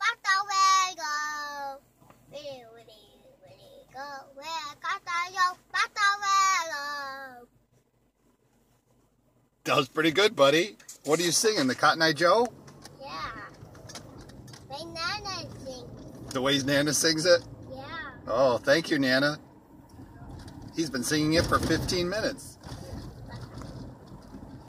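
No technical faults can be heard anywhere in this audio. Nothing in it points to a problem in how it was captured, processed or played back.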